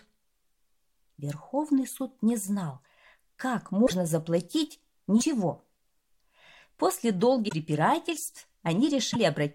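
Short glitches break the sound at 3.85–3.92 s, 5.20–5.23 s, 7.48–7.53 s and 9.11–9.16 s. Each is a brief jump with garbled noise or a gap. The likely cause is a broken MP3 bit reservoir: after lost frames, the decoder reads borrowed bits from the wrong frame, which fits 24 ms frames.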